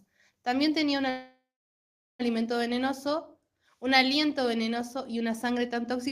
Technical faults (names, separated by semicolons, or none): call audio freeze